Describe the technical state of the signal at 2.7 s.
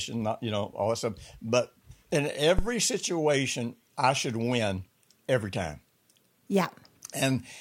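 At 2.7 s the signal is just coming out of a phantom power thump that runs from about 2.59 to 2.70 s. A supply switched on or off on a live input sends a voltage step through the coupling capacitors, heard as a deep, dull thud peaking at about -12 dBFS and dying away with a decay of about 26 ms. On the waveform it shows as a large one-sided swing easing back to zero; on a spectrogram, a brief band of low-frequency energy.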